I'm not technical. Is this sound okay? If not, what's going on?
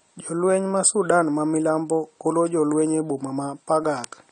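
No. The speech sounds dull and muffled from start to finish, with a swirly, fizzy edge on hissing sounds. Nothing above about 9 kHz comes through. The likely cause is AAC compression, squeezed so hard that fine detail gets thrown away.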